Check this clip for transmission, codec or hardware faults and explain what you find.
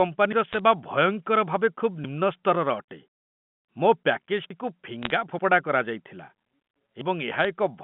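There are three short bursts of bit errors on a digital phone line, at 0.53 to 0.59 s, 5.03 to 5.10 s and 7.41 to 7.45 s. They ride on narrowband telephone-coded speech, which carries nothing above about 3.4 kHz.

Bit errors on a digital phone line: flipped bits corrupt single mu-law samples. Sign or high-order hits make sharp ticks that cluster into brief crackle. The waveform shows isolated one-sample spikes, and the spectrogram shows thin full-band vertical lines. The density points to a low error rate, well under one percent.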